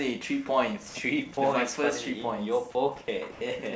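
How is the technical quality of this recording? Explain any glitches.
Two short dropouts occur in the speech, at 0.89 to 0.95 s (60 ms) and 3.32 to 3.41 s (90 ms, with about 70 ms of sound lost). Both are likely sound dropped by the voice detector: it treated part of the sound as background and stopped sending, and comfort noise filled each gap. The audio briefly gives way to steady noise or near silence, then resumes. The call-codec band limit leaves nothing above 8 kHz, and faint room noise sits about 35 dB below the speech.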